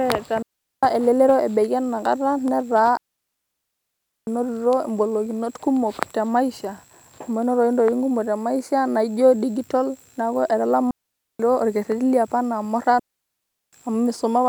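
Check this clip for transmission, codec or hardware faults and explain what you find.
Four digital wireless dropouts break up this speech clip. Each time, the radio link lost more data than the receiver could repair, so it muted with a very fast fade instead of passing damaged audio. The holes fall at 0.42 to 0.83 s (about 404 ms); 2.97 to 4.27 s (1.3 s), just before "engolikinot kumok"; 10.91 to 11.40 s (about 487 ms), after "naijio dijital neeku"; and 12.99 to 13.73 s (about 735 ms), after "liopa enaa". Each is clean near-silence, with no noise burst on either side.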